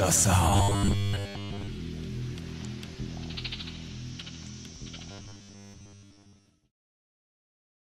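From 0.50 to 1.69 s and again from 5.11 to 6.50 s, audio likely arrives too seldom, so most of each span repeats a 10 ms buffer, producing robotic sound from repeated short buffers: a rigid, metallic 100 Hz buzz.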